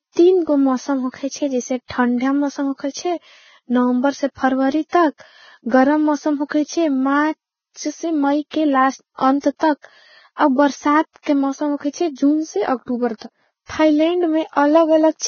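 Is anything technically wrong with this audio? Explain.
Yes. Throughout the speech, nothing sounds above about 6.6 kHz, and the remaining treble is hissy and grainy, with blurred consonant attacks. This is likely heavy Vorbis compression at a bitrate that fits around 16 kbps, with coarse quantisation turning fine detail into noise. A plain low-pass would sound dull but clean, not grainy.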